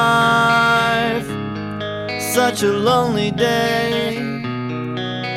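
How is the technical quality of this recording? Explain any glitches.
Nothing glitchy turns up here; there are no dropouts, clicks, skips or other technical hiccups to point to anywhere in the recording.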